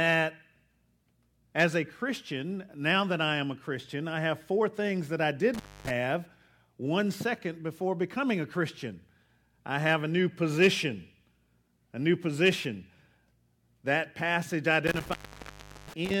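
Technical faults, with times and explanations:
5.54–5.90 s and 14.87–16.14 s, intermittent contact. Speech cuts out after "four things that I" for 256 ms, then later for 737 ms. A loose cable or plug briefly breaks the signal path. Crackle marks each edge, and faint hiss fills the gap.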